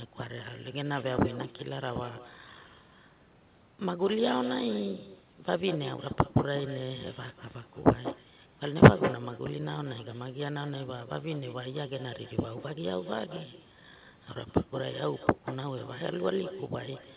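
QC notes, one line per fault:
Throughout, echo with no canceller: the far-end loudspeaker leaks into its microphone unremoved, so every phrase returns roughly a fifth of a second later, about 12 dB quieter.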